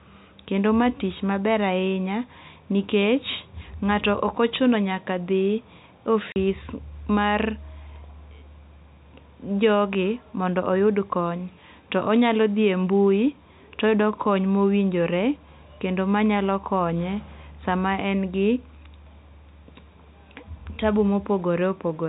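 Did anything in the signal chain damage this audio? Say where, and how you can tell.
Yes, at the network stage. Packet loss filled with silence cuts a 40 ms hole into the speech from 6.32 to 6.36 s. The gap starts and ends with hard edges, which fits two 20 ms packets of the telephone-band G.711 stream being replaced by silence.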